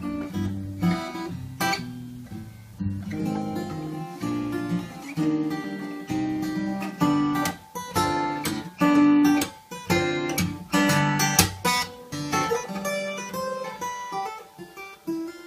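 At 5.63 s, compressed frames are skipped. About two 23.2 ms frames go missing, so the audio jumps ahead roughly 50 ms.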